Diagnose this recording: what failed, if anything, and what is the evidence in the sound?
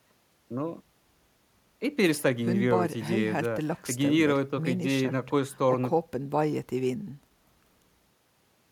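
Nothing failed: across the speech, no stage of the chain from capture through storage to playback leaves an audible fault.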